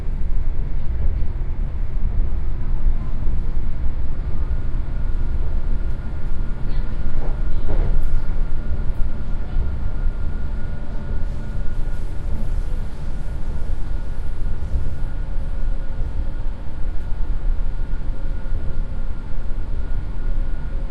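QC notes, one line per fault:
Throughout, MP3 compression: plainly audible codec damage, with a watery swirl as weak frequency components flicker between frames, and smeared attacks. This is likely lossy coding, short of bits at roughly 64 kbps.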